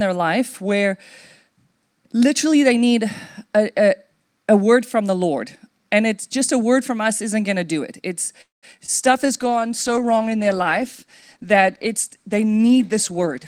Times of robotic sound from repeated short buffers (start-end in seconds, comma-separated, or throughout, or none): none